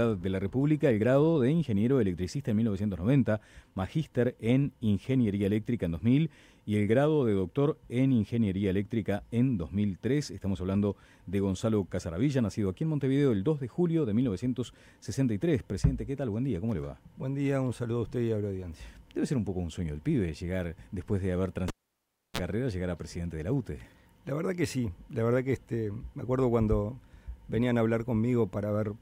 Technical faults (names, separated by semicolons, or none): cable pulled and plugged in